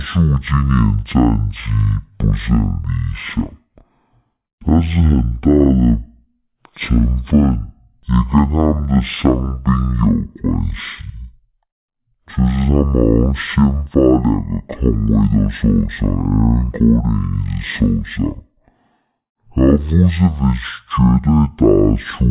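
From start to finish the speech sounds slow and deep, dragging at half speed and pitched a full octave down. This is a wrong sample rate fault: the audio fits material recorded at 16 kHz but played back at 8 kHz without conversion.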